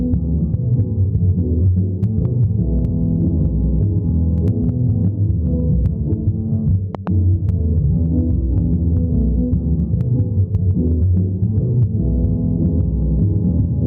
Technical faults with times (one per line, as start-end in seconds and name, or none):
0.00-13.87 gain pumping
6.95-7.09 loud pop